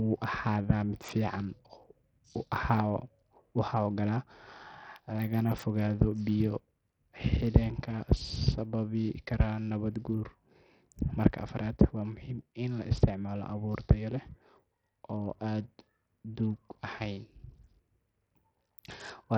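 A speech recording with heavy Bluetooth SBC compression damage running through all of it: treble thins and flickers, while a gritty quantisation noise and aliasing sit on the sound. This likely comes from an SBC link with a starved bit pool, consistent with roughly 64 kbps.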